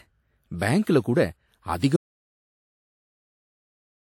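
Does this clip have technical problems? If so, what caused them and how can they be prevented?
Yes. An audio dropout to silence begins at 1.96 s and lasts to the end of the clip. The speech cuts off mid-flow and is replaced by silence, with no room tone or background hiss left, so the input signal itself stopped reaching the recorder while it kept writing silence. The likely cause is a lost input, such as a disconnected device, a failed link or an accidental mute. Securing connections and monitoring input meters during recording prevents it.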